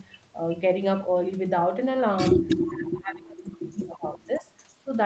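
From 2.49 to 2.63 s an echo leak shows up: a short copy of the speech returns about 332 ms late, about 10 dB below the direct voice, likely because the far end's echo canceller let its loudspeaker pickup through. Unlike room reverberation, which smears the sound continuously, this is a distinct repeat at a fixed delay that arrives as an isolated scrap.

Right after, from 2.64 to 4.52 s, the speech is suppressed in double talk. The voice repeatedly sinks, by about 30 dB at its deepest, for about one and a half seconds in total, likely because the echo canceller, faced with both sides talking, treated the talker as echo and turned it down. It differs from packet-loss dropouts because the level dips and cuts out in pieces while the other side is active, instead of producing warbly concealment.

Near the end of that stretch, at 4.35 to 4.4 s, a second echo leak slips through at the same 332 ms delay but far quieter, around 25 dB down. 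The matching delay likely marks it as the same return path.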